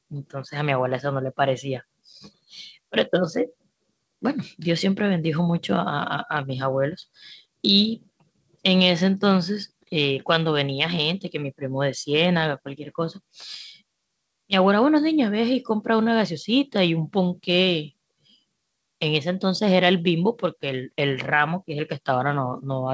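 Nothing goes wrong anywhere in this speech; it just has the ordinary band limit of a call, with nothing above 8 kHz, which fits the usual call microphone processing and a G.722 link at 64 kbps.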